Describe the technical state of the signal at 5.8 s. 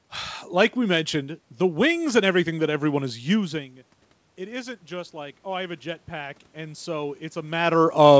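At 5.8 s the signal is in the middle of an automatic gain rise that runs from 4.36 to 7.63 s. The input had dropped by about 17 dB, so the gain control slowly pushes its level up by about 6 dB over those three seconds. What sets it apart from a talker simply coming closer is that the room noise swells along with the voice, at the same gradual pace, rather than the voice alone getting louder.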